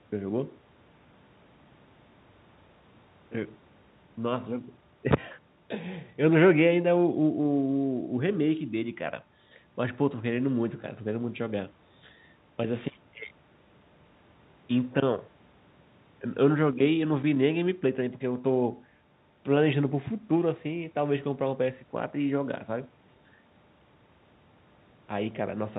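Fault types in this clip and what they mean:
Nothing stands out as a fault: the speech carries the narrow, bass-trimmed sound of a call microphone passed through G.711 telephone coding, which leaves nothing above 4 kHz and at most a faint level-following quantisation hiss.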